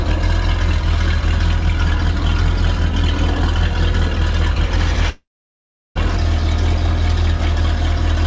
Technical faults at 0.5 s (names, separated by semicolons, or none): none